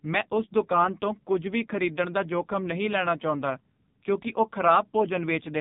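The speech has passed through the AMR narrowband mobile codec for its whole length, coded at what sounds like a very low bitrate, near 6 kbps. Nothing above 3.8 kHz survives, so it sounds muffled and telephone-like, while heavy coding damage leaves a buzzy, synthetic edge.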